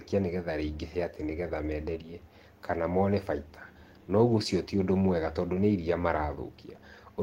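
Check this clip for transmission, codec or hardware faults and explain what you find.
No transmission, codec or hardware faults can be heard in the speech, and the signal holds steady with no audible disruption anywhere in the recording.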